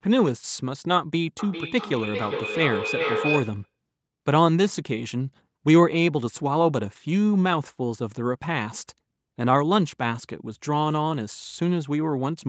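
From 1.39 s to 3.73 s there is feedback echo between two devices. A second device in the same room plays the call audio aloud, the first device's microphone sends it back into the call, and neither echo canceller removes sound played by the other device. The speech returns at a fixed interval of roughly 0.4 s, and each pass sounds thinner and more ringing. The loudest repeat reaches about 4 dB below the direct speech. The call's band limit near 8 kHz holds throughout.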